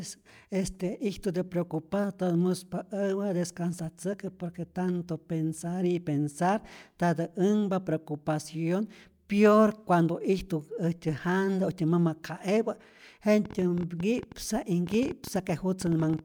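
A speech recording with a train of clicks running from 13.45 s to 16.20 s, at around 11 per second but unevenly spaced, about thirty in all, each peaking roughly as loud as the speech and ticking through the pauses as well. The likely cause is electrical interference from nearby equipment or a faulty connection or power supply. On a spectrogram they appear as thin vertical broadband lines; on the waveform, as narrow, similar-shaped spikes.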